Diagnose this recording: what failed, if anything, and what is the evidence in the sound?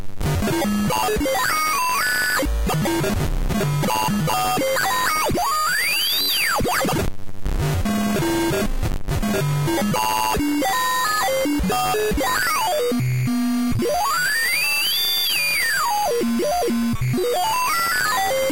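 An unreliable data bit appears from 14.82 s to the end at 18.51 s, at the converter or its digital data path. A steady fizzing crackle runs underneath the sound and persists through quiet moments. One marginal data line randomly flips its bit, adding identical spikes of about -30 dBFS.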